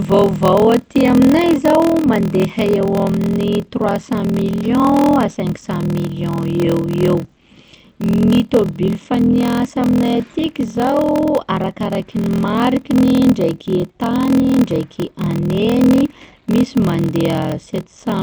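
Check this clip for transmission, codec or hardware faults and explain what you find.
Two faults are audible in this speech clip: a steady block-size problem running through the whole recording, and one brief dropout near the middle.

Block size mismatch (padded), throughout: each block written is shorter than the block read, and zeros fill the remainder. This produces a constant 41.7 Hz buzz and slows the speech to 0.889 times normal speed at roughly unchanged pitch, which fits 1024-sample blocks being read as 1152. On a waveform, evenly spaced flat gaps appear; a spectrogram shows thin vertical stripes repeating about every 24 ms.

Short concealed packet loss, 8.27 to 8.35 s: about 40 ms of audio never arrived in time. The receiver covered roughly 38 ms of it by extending the preceding sound, then crossfaded back, leaving a short smear or wobble. A spectrogram shows smoothed, repeated harmonics or blurred noise in that slot, with no sharp edges.

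The call path's Opus coding is audible as a spectrum that stops at 8 kHz.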